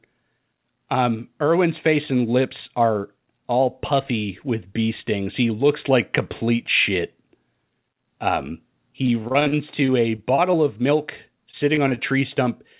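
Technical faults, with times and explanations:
9.06–10.55 s, repeated packet loss (robotic sound): Over this stretch about a dozen short holes open in the stream, none longer than 43 ms. Each is patched by stretching the sound just before it, about 230 ms in all, roughly 15% of the span, and about 140 ms more is simply missing. The repeated smears and dropouts make the speech choppy, within the narrow call band that stops at 4 kHz.
11.51–11.99 s, repeated packet loss (robotic sound): A shorter burst of the same problem. A handful of gaps, the longest 20 ms, are filled by carrying the last sound forward, about 76 ms of patching, roughly 16% of the span. Another 60 ms is lost outright. The speech briefly turns choppy and broken before the clip ends.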